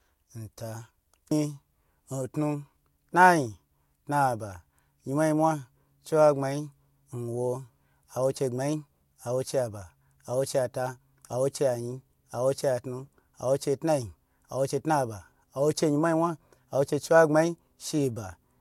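No technical faults can be heard anywhere in this speech recording. Nothing in the audio calls for a timestamp or an explanation.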